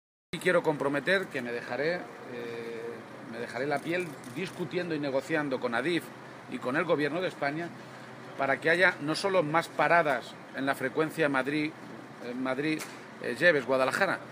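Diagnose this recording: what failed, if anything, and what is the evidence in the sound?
A cut-off start at the capture or recording stage: the file holds digital silence until about 0.33 s, then the sound enters mid-event with no attack or fade. The waveform jumps abruptly from a flat line, and the spectrogram shows a hard vertical onset edge.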